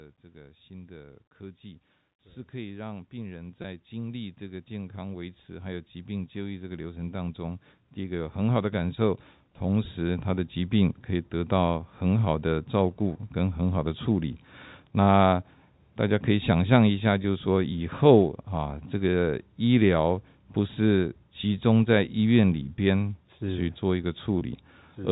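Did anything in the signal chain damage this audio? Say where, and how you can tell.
Yes. At 3.62–3.64 s, 13.14 s, 17.23 s, 22.77 s and 24.39–24.41 s the sound briefly holds with a slight buzz. This is network packet loss with pitch repetition: 10 to 20 ms gaps, fitting one or two lost packets, filled by repeating the last pitch period.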